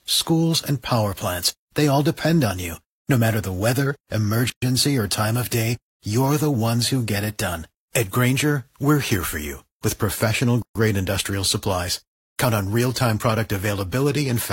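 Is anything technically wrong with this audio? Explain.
Yes. Gaps at joins of encoded pieces appear at 4.50 s (about 123 ms, after "matter the weather") and 10.62 s (about 130 ms, before "industrial supplies"), six seconds apart. Separately encoded segments were joined with their encoder delay and end padding left in, so abrupt, slightly smeared silences open mid-speech. Unlike a dropout, nothing is lost: the speech resumes exactly where it stopped.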